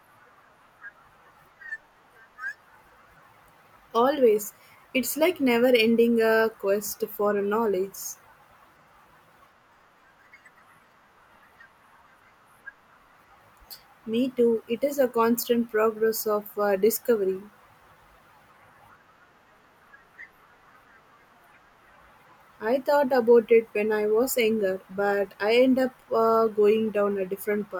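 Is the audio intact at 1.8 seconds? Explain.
Yes, at 1.8 seconds the speech plays through intact, with no dropout, click, distortion or other fault to be heard at that moment.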